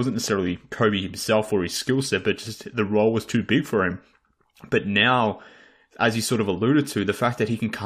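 Listening closely to this speech recording, nothing technical stood out at any point.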